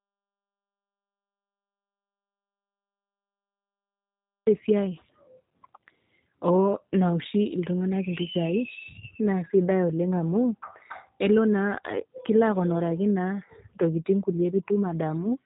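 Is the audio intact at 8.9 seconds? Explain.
No. At 8.9 seconds, as through the whole clip, the speech sounds rough and plainly synthetic, with nothing above 3.8 kHz. This is G.729 codec damage: each 10 ms frame is rebuilt from a vocal tract filter, pitch predictor and a few pulses, which fits an 8 kbit/s stream.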